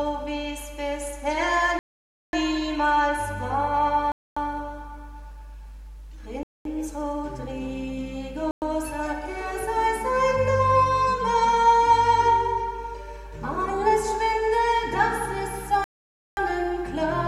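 Five Bluetooth stalls cut the audio to flat-line silence, seen as blank vertical gaps in the spectrogram, at 1.79–2.33, 4.12–4.37, 6.43–6.65, 8.51–8.62 and 15.84–16.37 s, likely from interference briefly starving the headphones' buffer.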